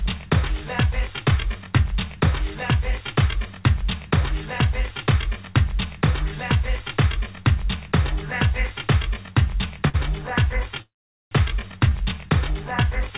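The audio comes through a call path with nothing above 4 kHz, which fits G.711 mu-law at 64 kbps. At 9.88 s there is a short stall from a late packet. The sound is held too long, for about 57 ms, until 9.96 s. A packet was late and the jitter buffer ran dry. The receiver stretched the last sound to cover the wait. Nothing is lost. The audio resumes from the same point, now 57 ms behind. At 10.82 s the audio freezes until 11.33 s. The last sound turns into a brief fading buzz or hiss. Then about 0.44 s of silence follows, roughly 0.49 s of filled time in all. This is a call audio freeze, likely caused by packets held up in transit. Playback resumes where it stopped. Nothing is missing, but the audio is now about half a second later.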